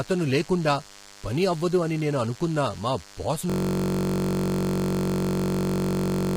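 From the first moment, a DECT cordless phone buzz sits under the speech. It is a thin, steady buzz at 100 Hz, roughly 20 dB below the speech. A nearby handset or base sends a radio burst every 10 ms, and the audio circuit rectifies it. On a spectrogram it forms flat horizontal lines at 100 Hz and its many harmonics across the whole clip.

Also throughout, the speech is rough and grainy, with noise filling the gaps between the harmonics and a thin, synthetic-sounding top band. The likely cause is heavy low-delay AAC compression (AAC-ELD) at a low bitrate, which fits about 24 kbps. Its short frames resolve pitch harmonics poorly. A spectrogram shows smeared, blotchy harmonics and a patchy upper band.

At 3.50 s a system hang loop takes over and lasts to the end. A single 21.33 ms piece of audio repeats exactly, which fits a 1024-sample buffer. It is heard as a frozen buzz at 46.9 Hz. On the waveform, identical cycles repeat without change. 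On the spectrogram, the speech detail stops and is replaced by a rigid comb of lines spaced 46.9 Hz apart.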